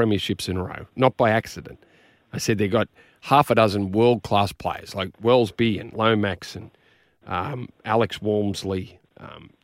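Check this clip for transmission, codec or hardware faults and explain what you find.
Checking this clip turns up nothing to explain.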